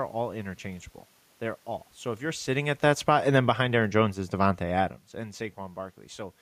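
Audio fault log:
2.47–4.95 s, automatic gain falling: right after "if you're" the AGC eases its gain down about 6 dB, so the speech and the room noise sink together.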